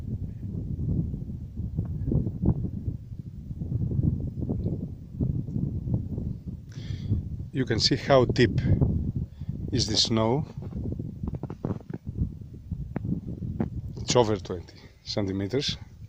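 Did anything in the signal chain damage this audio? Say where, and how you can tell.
No, I can't hear damage from any stage of the signal chain in this audio. Nothing in it points to a problem between capture and playback.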